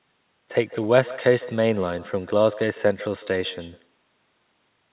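From the start to the end of the speech, every phrase is trailed by a faint second copy. This is echo with no canceller. The far end is playing the call through a loudspeaker. Its microphone picks that sound up and returns it, and nothing subtracts it. The copy arrives after the network round trip, roughly 150 ms late. It sits about 18 dB below the direct speech. It sounds thin, a ghostly shadow behind each syllable. Both copies stop at 4 kHz, which fits narrowband G.711 telephone coding.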